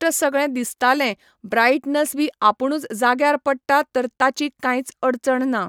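No technical faults can be heard anywhere in the speech. Nothing in the recording calls for a timestamp or a fault description.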